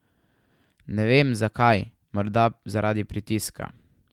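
Speech recording, with no technical fault audible anywhere in it. There is nothing to time or to trace to a cause.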